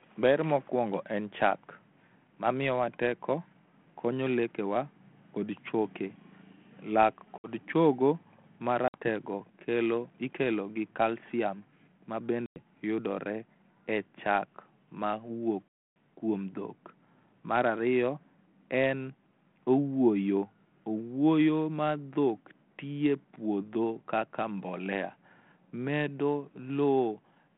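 Speech on a G.726 ADPCM line has packet loss on an ADPCM call. Hard-edged silences fall at 7.38, 8.88, 12.46 and 15.69 s, losing 60, 60, 100 and 280 ms. The third ends before "yudore e chak". Afterwards the decoder's predictor and step size mistrack briefly.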